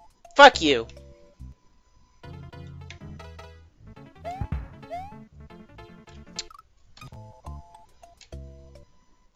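No technical faults can be heard anywhere in the audio.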